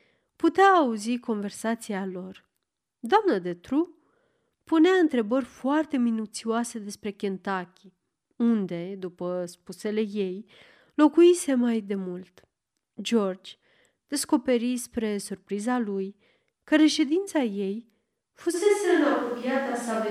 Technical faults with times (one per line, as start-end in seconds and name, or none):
18.56-20.10 switch to a distant microphone